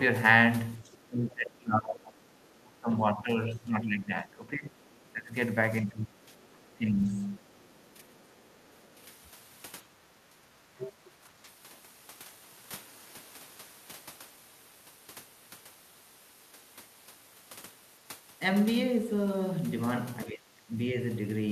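Speech suppressed in double talk runs through this speech recording from 0.79 to 11.49 s, with the talker dipping by up to roughly 20 dB over about five seconds in total, and again from 20.25 to 20.95 s, dropping about 25 dB; the likely cause is an echo canceller that cannot separate the local talker from loudspeaker echo and turns both down. The other side's voice leaking through appears faintly, well below the talker, from 0.8 to 2.56 s and from 4.86 to 8.95 s, then as a much louder brief scrap at 10.78 to 10.92 s, likely because the echo canceller left part of the far-end playback in the microphone signal.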